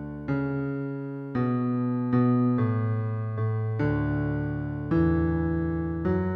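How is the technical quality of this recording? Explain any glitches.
Listening closely, nothing stood out as a glitch or technical problem anywhere in the recording.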